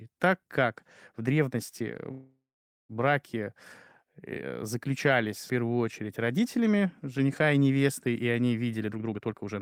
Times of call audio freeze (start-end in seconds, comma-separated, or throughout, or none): 2.11-2.92